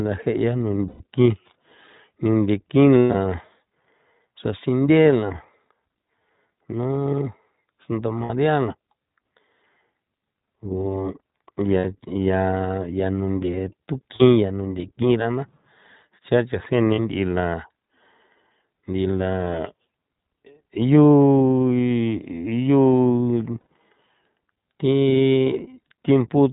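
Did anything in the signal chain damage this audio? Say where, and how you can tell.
Yes. At the codec stage, the whole clip carries iLBC coding. Nothing above 4 kHz survives, so the speech sounds narrowband. It is a little rough and synthetic throughout. That fits a 15.2 kbps mode working on 20 ms frames. Each frame's excitation is coded on its own. The damage is plainly audible. It is a steady texture, not a passing glitch.

At the network stage, there are lost iLBC frames. Gaps fall at 0.88 to 1.02 s, 2.99 to 3.15 s, 8.24 to 8.31 s, 11.78 to 11.86 s, 14.16 to 14.22 s, 16.94 to 16.99 s and 23.60 to 23.66 s. Each sounds like a held, buzzy vowel. The decoder repeats the last pitch cycle with noise added. The 2.99 s loss is scattered, with its longest run around 100 ms. Speech recovers almost immediately after each gap.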